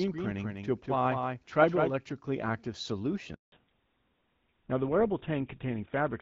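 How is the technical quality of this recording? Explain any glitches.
The recording has three distinct problems: a doubled track at the start, a brief dropout, and a loss of bandwidth for the rest of the clip.

From the start until 1.9 s a doubled audio track is audible. A second, full-band copy of the speech trails the original by roughly a fifth of a second, about 5 dB quieter, with no reverberant tail. It cuts off abruptly at 1.9 s. The likely cause is the same signal arriving again through a slower capture path.

From 3.34 to 3.52 s there is a handover gap. The call switched networks and no speech frames arrived for 180 ms. The voice fades within a few tens of milliseconds into silence, and whatever was said during that span is lost.

At 3.52 s the call falls back to narrowband. Up to that point it carries the wideband sound of HD Voice, consistent with AMR-WB around 12.65 kbit/s. Afterwards nothing above 4 kHz remains, which points to a switch to GSM full rate. 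The voice turns duller and rougher through to the end.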